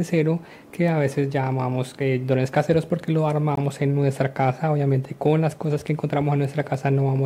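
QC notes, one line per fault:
3.55–3.58 s, gap between stream segments: a hard-edged hole of about 20 ms of silence. The time stamps of adjacent segments, which fit roughly 4-second segments, leave a small gap that the player fills with silence. No audio is lost. The silence simply delays the sound after it.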